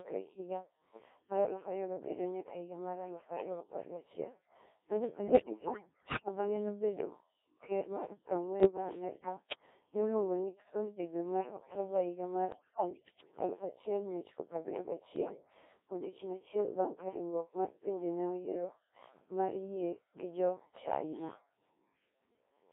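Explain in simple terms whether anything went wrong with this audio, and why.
The speech passed through the Codec 2 vocoder, which sends only a rough description of the voice and rebuilds it from tones, so it sounds robotic, buzzy and thin.

Bit errors on digital voice radio corrupted that description at 5.25 to 6.28 s, 8.60 to 9.66 s, 12.52 to 13.32 s and 15.16 to 15.54 s, making the voice jump, warble and turn to gibberish.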